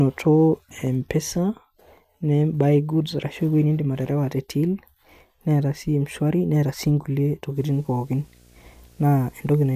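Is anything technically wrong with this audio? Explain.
Yes. From 7.56 s to the end, video or display buzz appears. A screen feed couples in, adding a 59.94 Hz buzz with hash and a 15.7 kHz whine, well below the speech.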